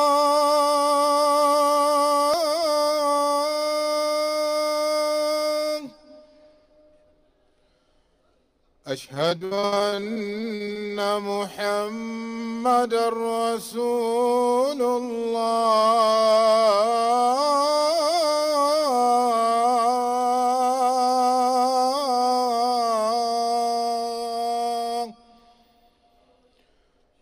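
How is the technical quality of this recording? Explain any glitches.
Three separate glitches affect the recording.

At 2.34 s there is a small jump in the sound, likely a dropped buffer (overrun), where roughly 10 ms was overwritten before being read.

From 9.14 to 10.91 s, repeated packet loss gives a choppy sound with pieces missing. About 31% of the span is concealed, with gaps up to 70 ms patched by extending the previous audio.

From 12.46 to 13.00 s, a jitter buffer speed-up runs the audio at 107% speed without a pitch change. It trims about 40 ms in short pieces to reduce the delay.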